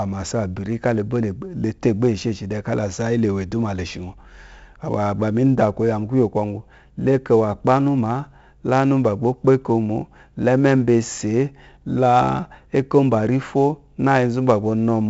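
Throughout the speech, 4-bit ADPCM compression coarsely quantises each sample, leaving heavy gritty hiss that rises and falls with loudness and disappears in pauses, unlike a steady noise floor. Nothing sounds above 7.7 kHz, consistent with a 16 kHz sample rate.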